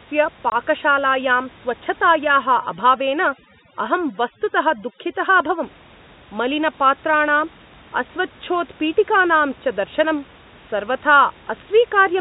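A lost packet that the receiver replaced with silence breaks this telephone-band speech recording at 0.50 to 0.52 s, a clean 20 ms gap that fits a single missing 20 ms packet. This is packet loss filled with silence. With no concealment, the waveform drops straight to silence and returns just as abruptly, so the hole has hard edges.

From 2.44 to 5.63 s, noise removal set far too aggressively acts on the room noise, which otherwise sits about 26 dB below the speech. This overdone noise removal shuts individual frequency bands whenever they come near the tool's noise estimate, and the quieter parts of the voice are removed along with the noise. The background in that stretch drops and breaks up into twinkling, musical specks. The speech is limited to the 4 kHz telephone band of the G.711 link throughout.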